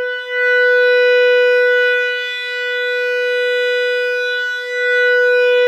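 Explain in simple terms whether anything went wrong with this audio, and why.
Nothing went wrong with this music that a listener would notice. It sounds the way it should all the way through, so there is nothing here to fix.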